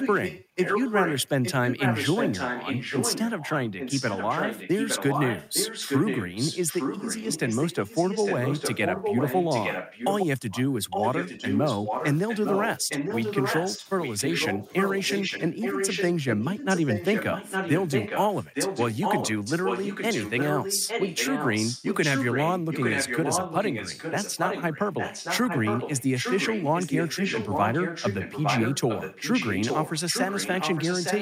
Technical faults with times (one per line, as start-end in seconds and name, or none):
0.00-10.26 echo leak
10.51-31.22 echo leak
12.25-12.29 speech suppressed in double talk
12.80-13.09 speech suppressed in double talk
13.77-13.87 speech suppressed in double talk
14.55-14.70 speech suppressed in double talk